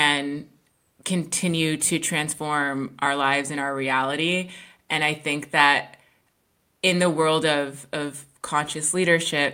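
No audible technical faults occur anywhere in the recording, with no dropouts, clicks, distortion or timing errors to report.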